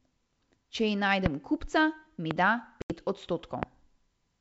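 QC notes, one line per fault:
1.26–1.28 s, 2.31–2.33 s and 3.63–3.65 s: loud pop. Each is a single sharp pop about 20 dB above the speech. The first comes just before "kupca mi", the second just after it. The likely cause is a sudden voltage pulse, and the speech carries on underneath.
2.82–2.95 s: packet loss on an ADPCM call. About 80 ms drops to hard-edged silence, which fits roughly four lost packets. The decoder's predictor loses step, so the speech resumes unevenly before settling.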